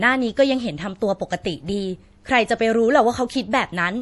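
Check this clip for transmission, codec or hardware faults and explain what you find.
There's one codec fault, running through the whole speech clip: likely MP3 compression, at a low bitrate. Nothing comes through above 11.5 kHz, and the encoder drops weak frequency lines frame by frame, so the audio sounds dull and watery, with swirly, metallic edges on s sounds.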